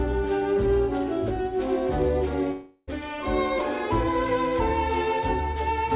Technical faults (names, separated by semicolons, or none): long network dropout